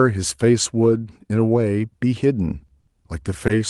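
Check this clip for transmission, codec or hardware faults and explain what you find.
Three short stalls from late packets occur near the end of the speech, at 2.66 to 2.71 s, 2.80 to 2.90 s and 3.47 to 3.52 s. Each holds the current sound a beat too long, with a faint buzzy or dipped quality, and then resumes without skipping anything. The jitter buffer ran dry while it waited for a late packet, so the receiver stretched the last audio. That filled about 20 ms, 70 ms and 20 ms, and playback was pushed later by the same amounts. The call codec's coding noise and high-frequency limit around 12 kHz are present throughout.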